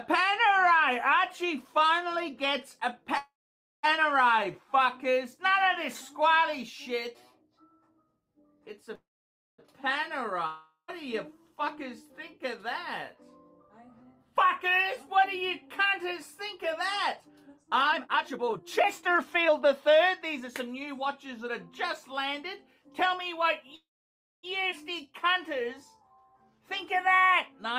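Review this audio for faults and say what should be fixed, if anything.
Call audio freeze at 3.17–3.85 s, 8.95–9.60 s and 23.76–24.45 s: the sound stalls and its last moment is stretched into a fading buzz that sinks into silence for about 0.53, 0.56 and 0.60 s. When playback resumes, it picks up exactly where it stopped, so nothing is lost but each stall adds roughly 0.63–0.68 s of delay. The likely cause is delayed packets draining the jitter buffer empty. Prevent this with a steadier network path or more jitter-buffer headroom.

Long network dropout at 10.46–10.90 s: the last sound is held as a decaying hiss, with the final 0.12 s dead silent. When audio returns, 0.42 s of it is gone, which points to packets that were likely lost outright rather than held up. Prevent this with forward error correction or redundancy on lossy links.

Jitter buffer speed-up from 11.76 to 22.32 s: the audio runs at 112% speed with unchanged pitch and sounds hurried. 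The receiver trimmed pitch-period-sized slices, about one and a half seconds in total, to shed excess buffered audio. Prevent this with gentler, slower delay adaptation.

Skip ahead at 24.71–24.74 s: playback jumps forward with an almost seamless join, and around four tenths of a second of audio is missing across the splice. This is audio dropped in transit or by the buffer when it overflowed. Prevent this by letting time-scaling absorb the excess instead of dropping it.

Jitter buffer slow-down from 25.02 to 27.72 s: the audio runs at 91% speed at the same pitch, with drawn-out sounds, as repeated pitch periods add 252 ms to rebuild the reserve. Prevent this by holding a stable target delay rather than swinging between extremes.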